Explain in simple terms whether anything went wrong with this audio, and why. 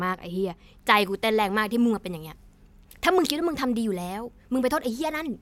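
From 0.97 s to the end at 5.42 s, the speech suffers from pre-emphasis left on. Some recording and transmission systems deliberately boost the treble, counting on a matching cut at playback to restore the balance. Here that cut never happened, and the boost fits the CD-style 50/15 microsecond curve. So the highest frequencies come through much too strong, making the speech sound thin, overly bright and hissy, with harsh s and sh sounds.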